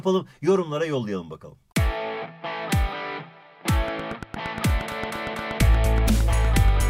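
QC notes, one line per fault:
3.88–6.82 s, train of clicks: about thirty regular clicks at 8.5 per second, peaking some 5 dB above the sound, likely from interference, a faulty connection or power supply.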